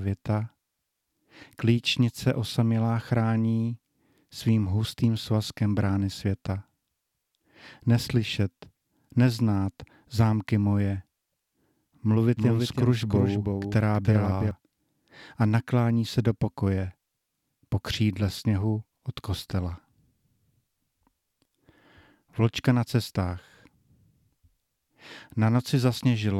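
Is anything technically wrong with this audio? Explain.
Yes. From 12.37 to 14.51 s there is a doubled audio track, likely from the speech being captured a second time through a slower path. A second full-band copy trails about 300 ms behind, around 5 dB quieter, with no room colour, cutting in and out abruptly.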